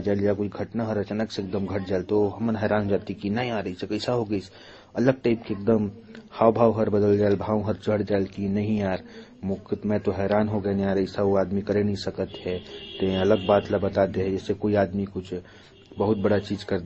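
Throughout the speech, nothing reaches above about 8.2 kHz, and two kinds of artefact are heard together: the swirly, smeared highs of a low-bitrate MP3 and a different, grainier coding texture. That mix, unlike the single signature of one codec, points to likely transcoding between lossy codecs, consistent with MP3 at 32 kbit/s, then Opus at 24 kbit/s, then MP3 again, each pass coding the previous damage.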